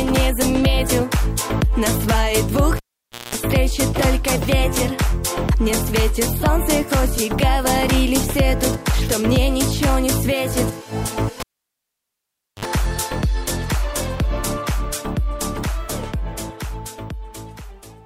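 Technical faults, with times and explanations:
2.77–3.35 s and 11.40–12.65 s, cable pulled and plugged in: each time a live lead is yanked, giving a sharp pop, then near silence for about 0.53 s and then 1.2 s. As the plug goes back, only its tip touches at first, so mains buzz leaks in for about 206 ms at 60 Hz, then about 57 ms at 50 Hz. A second pop follows as the signal returns. The pops show as full-height vertical lines on a spectrogram, and the gaps show as flatlined waveform. The buzz appears as evenly spaced horizontal harmonic stripes.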